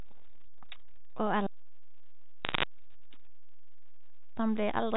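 Running under the whole speech clip is a DC offset: nothing audible, but the waveform sits shifted off zero by a constant amount. It shows up as a steady lump of energy at the very bottom of the spectrum and eats into headroom on one side, so peaks of one polarity will clip sooner than the other. Something in the chain has added a fixed bias that was never filtered out.

From 2.45 to 2.63 s a brief patch of sharp ticks and crackle sits over the speech without changing it underneath, the signature of bit errors on a digital phone line. The line carries G.711 A-law at 64 kbps, where every 8-bit code is one sample on a logarithmic scale, so a single flipped bit spoils just that sample. Hits on the sign or upper bits throw it far off and click. The density suggests an error rate somewhere around half a percent.

Then from 3.29 to 4.37 s the sound simply vanishes into a clean hole of near silence lasting about 1.08 s, with no burst of noise going in or coming out. 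That is a digital wireless dropout: the radio link lost too much data to rebuild the audio, and rather than play garbage the receiver muted behind a very short fade and came back the same way once the data was good again.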